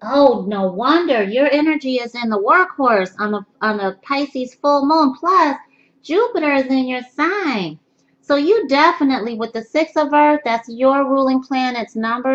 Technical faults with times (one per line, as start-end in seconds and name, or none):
none